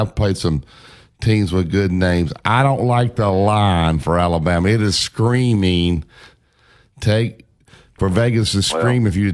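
Nothing goes wrong anywhere in this bit of speech, so there's no technical fault to point out.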